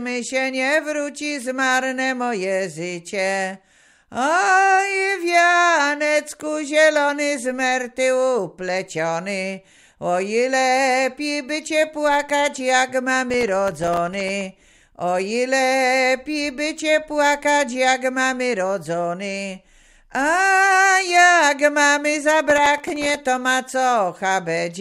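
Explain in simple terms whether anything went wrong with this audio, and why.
A gritty crackle tears through the sound from 13.30 to 14.44 s and again from 22.50 to 23.17 s. This is processor overload crackle: the computer fell behind, missing about thirty tiny chunks of audio each time, each a millisecond or two long, and every miss left a sharp little gap of silence.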